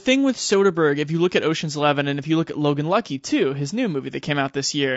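A short speech clip with plainly audible coding damage all the way through: the voice sounds rough and grainy, with noise between the harmonics. That's likely low-delay AAC compression (AAC-ELD, as in video calls), whose short frames handle pitch poorly at a low bitrate like 32 kbps.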